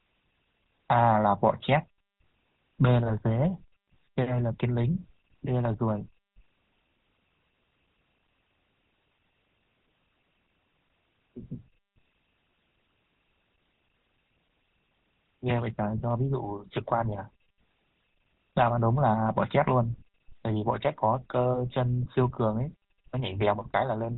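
Right from the start and all the way through, the speech carries GSM full-rate codec damage, and it's plainly audible. The excitation is rebuilt from sparse regular pulses, which fits a 13 kbps GSM stream, so the voice sounds buzzy and gravelly, with nothing above 4 kHz.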